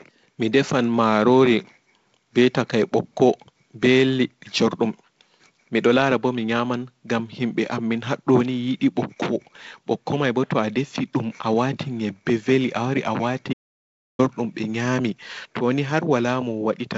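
From 13.53 to 14.19 s the speech drops out to silence for about 0.66 s, likely from a lost input while recording continued. Unlike a natural pause or gated noise floor, the gap is silent with no room tone left, with even the band-limited G.722 hiss below 7.7 kHz vanishing.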